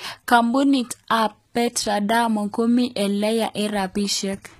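A speech clip with plainly audible HE-AAC compression throughout, likely from a very low bitrate around 20 kbps. The upper range of the sound is regenerated from copied lower bands rather than carried intact, so s sounds come out gritty and lispy while the overall brightness holds up. On a spectrogram the energy stops flat at about 14.9 kHz, and above the crossover the treble looks like a blurred, repeated echo of the lower bands, with harmonics that fail to line up.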